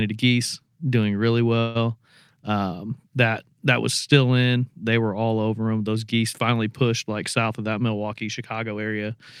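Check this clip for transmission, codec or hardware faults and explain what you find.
Two faults turn up, one early and one near the end.

From 1.59 to 1.77 s, right after "geese doing really", there's a call audio freeze. The last bit of sound gets stretched into a buzzy, hissy hold for about 156 ms. It never drops to silence, and then the speech picks up where it left off with nothing lost. The likely cause is packets held up in transit, so the jitter buffer ran dry and the receiver padded the gap. The net effect is a 156 ms gap pushed into the timeline.

From 7.49 to 8.86 s, just after "geese finally pushed like", you get a jitter buffer speed-up. The receiver had more audio queued than it wanted, so it kept trimming tiny chunks a pitch period or so long, around 150 ms in total. That stretch plays at about 110% speed with the pitch unchanged, so the talker sounds a bit rushed there.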